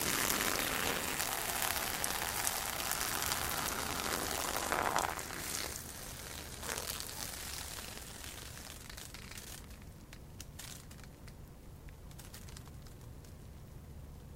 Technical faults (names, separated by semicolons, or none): none